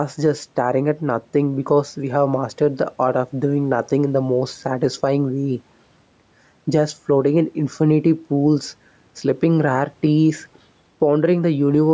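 Speech, with gain pumping throughout. The gain swings by roughly 5 dB. Loud and soft passages sit closer in level, so the sound feels squashed. The likely cause is microphone gain set far too high, with a fast limiter pulling it down on each peak. The faint room noise sits about 43 dB below the speech. Nothing reaches above 8 kHz, as expected from call microphone processing.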